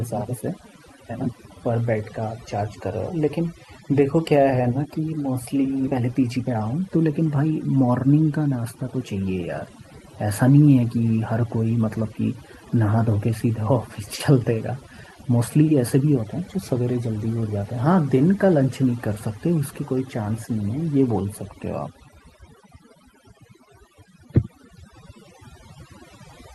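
All the way through, there's overdone noise removal: the suppressor was pushed so hard that background bands get pulled right down, leaving near-silence dotted with twinkly specks, and the quieter parts of the speech go with them.

At 5.87 s there's a skip ahead. Roughly half a second of speech just isn't there, and playback jumps straight forward with no fill at all. The two sides are butted together almost directly, which fits audio being dropped while later packets were already queued.

Right after, from 5.97 to 7.84 s, you get a jitter buffer speed-up. The receiver trims short pitch-period slices over and over to shed around 300 ms of built-up delay, so the speech runs about 14 percent fast at unchanged pitch and comes across noticeably hurried.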